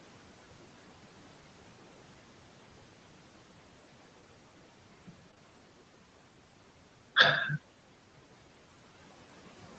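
All the way through there are noise suppressor artifacts. The room noise gets pulled down by about 12 dB between phrases and swells back under the speech. At 5.31 to 5.34 s and again at 5.34 to 5.38 s, short concealed packet loss hits back to back. Audio went missing and the receiver stretched the preceding sound over the gaps, so you hear a quick smeared wobble there.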